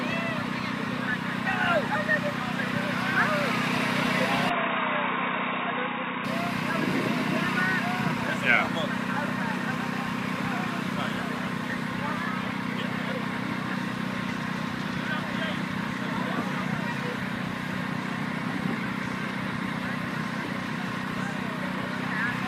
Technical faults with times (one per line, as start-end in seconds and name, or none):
4.50-6.25 input switched to a poorer device